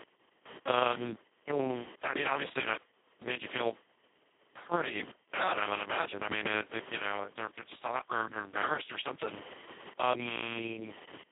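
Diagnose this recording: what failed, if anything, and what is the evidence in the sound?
Computer activity noise enters in the analogue wiring through a shared ground. A buzzing, chirping whine with a pulse rate near 1 kHz sits roughly 20 dB below the speech for the whole recording. Processor, graphics or mouse load shifts the ground potential the audio circuit references. The noise follows the computer's activity rather than the speech, which separates it from mains hum with its steady low fundamental and harmonics.

The Speex codec fault lies in the codec stage, and it runs throughout. The speech sounds noisy, hoarse and robotic, passes only about 200 Hz to 3.7 kHz, and has nothing above 3.9 kHz. The heavy damage fits a very low setting around 2 kbps. At that rate too few bits describe the excitation, and the codec behaves almost like a vocoder. Plain band-limiting would keep clean speech inside the band, but this voice is degraded within it too.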